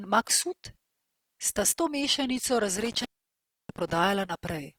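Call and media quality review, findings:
Opus compression, throughout: speech grainy and rough, bands noise-filled instead of holed, full bandwidth to 20.4 kHz. Likely Opus CELT mode, damage level fits about 24 kbps.

Intermittent contact, 2.76–3.98 s: crackle at edges, dropouts totalling about 0.65 s of open line with faint hiss. Loose cable or plug breaking connection momentarily.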